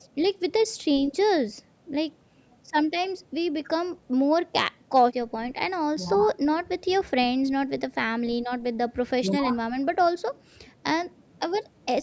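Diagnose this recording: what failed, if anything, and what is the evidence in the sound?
Nothing failed here: the speech simply sounds like it came through a call's normal microphone processing, with the lowest bass trimmed and nothing much above 8 kHz, exactly as you'd expect from that path.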